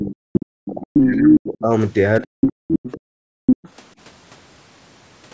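In this speech clip, the talker's voice sinks and breaks apart from the start to 1.72 s, losing roughly a second and a half in total and falling by something like 40 dB at its deepest, with a shorter, shallower dip from 2.21 to 2.29 s. This is speech suppressed in double talk. The likely cause is both parties speaking at once, so the echo canceller could not tell the local talker from the loudspeaker echo and pulled the whole microphone signal down.

A second voice, roughly as loud as the talker, cuts in at 0.33 to 0.43 s, 0.94 to 1.09 s, 2.4 to 3.0 s and 3.46 to 3.69 s. This is the other side's voice leaking through. The loudspeaker playing the far end is likely reaching the microphone, and the echo canceller is not subtracting all of it. The brief scraps early on overlap the suppressed stretch, and the longer stretch near 2.4 s sits right against the room-sound drops.

The background drops away abruptly by about 40 dB at 2.57 to 2.67 s and again from 3.0 to 3.46 s, then returns. 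This is background gated by the echo canceller: while far-end audio was playing, the canceller clamped the microphone hard, taking the room sound with it until it released. The call's microphone processing, which leaves nothing above 8 kHz, sits underneath all of this.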